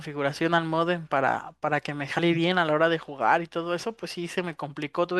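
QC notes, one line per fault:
2.18 s, compressed frames skipped: about 40 ms of speech drops out, likely two 21.3 ms frames.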